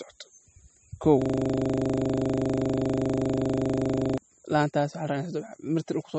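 From the start and throughout, the speech has nothing above 8.4 kHz, with a watery, swirling texture and softened consonant attacks. This is likely MP3 compression: the encoder cut the treble and dropped weak frequency components that flicker between frames, which fits a low bitrate around 32 kbps.

From 1.22 s to 4.18 s, a system hang loop replaces the speech. A 40 ms slice repeats 74 times, producing a rough buzz at 25 Hz. The host or driver froze while the audio hardware kept replaying the same buffer.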